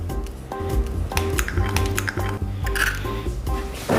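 From 0.6 s to 2.37 s a doubled audio track runs under the original: a second full-band copy trails by roughly 0.7 s at about the same level, so everything is heard twice, like a hard slapback with no decay or room colour. The copy likely comes from the sound being captured again through a slower path. On a spectrogram, every pattern repeats about 0.7 s later. In the waveform, the copy begins and ends abruptly at those edges.

At 1.49 s an overlap between stream segments produces a tiny skip. Two segments' time stamps claimed the same stretch, and the player discarded the overlap even though that sound was not actually duplicated, so a few milliseconds are missing and playback jumps forward. The waveform shows a sudden discontinuity there, and the spectrogram a thin vertical broadband line. The stream's segments are 2 seconds long.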